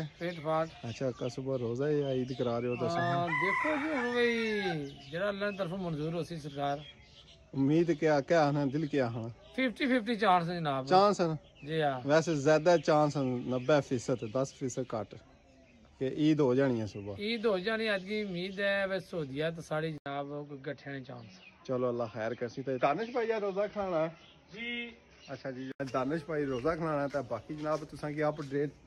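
At 19.98 s the sound cuts out for 80 ms. It returns dull and boxy, with nothing above 6.2 kHz. A faint new noise floor sits far below it. Loudness stays about the same. This lasts until 25.80 s. The likely cause is an input switched to a poorer device.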